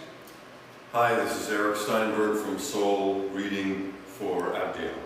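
No technical faults are audible.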